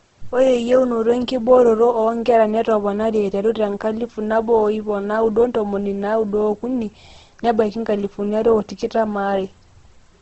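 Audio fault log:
Throughout, Opus compression. The speech sounds rough and grainy, and there is no content above about 8.2 kHz, so it is also dull. The likely cause is Opus at a very low rate, near 12 kbps, in its wideband music mode. Short of bits, the encoder keeps each band's energy but fills in the detail with noise or copies of lower bands. That gives the heavy roughness rather than swirling holes.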